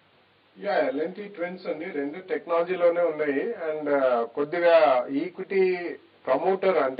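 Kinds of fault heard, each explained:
No technical fault can be heard anywhere in the audio.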